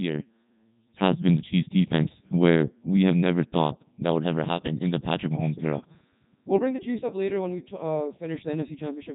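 Speech with heavy Codec 2 vocoder damage throughout: buzzy, robotic sine-wave resynthesis, fitting a 3.2 kbit/s mode, and a spectrogram showing nothing above 3.8 kHz.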